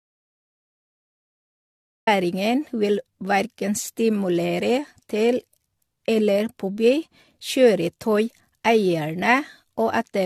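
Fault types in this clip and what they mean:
Generation loss: The speech has a swirly, hollow, smeared quality, with soft blurred onsets, more damage than one lossy pass would leave. It sounds like repeated re-encoding, most likely about four passes through AAC-LC at 64 kbit/s, each adding fresh quantisation noise and spectral holes.
Audio dropout to silence: The clip opens in dead silence with no room tone at all, and the speech only arrives at 2.07 s. The input was already lost when the clip begins, likely from a disconnected source or stray mute, with silence written meanwhile.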